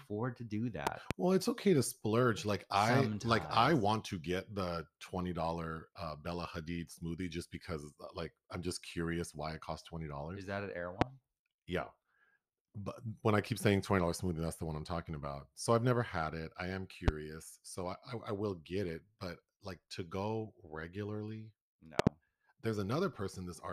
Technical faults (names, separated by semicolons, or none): loud pop